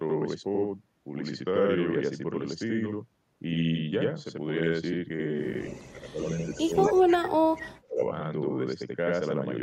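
All the way through there's a channel delay doubling. One side arrives about 85 ms late, which fits a 4096-sample buffer. Summed to mono, that gives an equal-level slap right behind everything.

At 5.6 to 5.91 s, again at 6.19 to 6.54 s and 6.76 to 7.15 s, a faint copy of the voice trails 230 ms behind, about 20 to 30 dB down. That's likely an echo leak from a loudspeaker the canceller didn't fully clean up.

Overlapping those, from 5.91 to 8.02 s the speech is turned down, dipping by roughly 35 dB at worst, for around a second and a half in total. That's likely speech suppressed in double talk.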